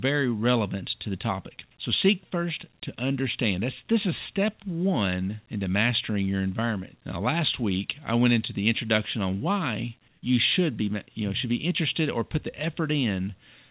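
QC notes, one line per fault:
10.08–10.22 s, comfort noise in place of the background: after "the introduction on why" and before "you should be you", 140 ms of background becomes steady, featureless noise about 2 dB quieter, likely discontinuous transmission pausing the sender while the receiver fills the gap synthetically.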